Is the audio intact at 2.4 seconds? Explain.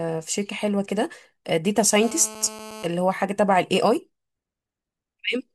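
No. A GSM phone buzz runs from 2.03 to 2.86 s: a nearby 2G handset's 217 Hz transmit bursts, rectified by the audio circuitry, give a harsh, harmonic-rich rasp about 16 dB below the speech.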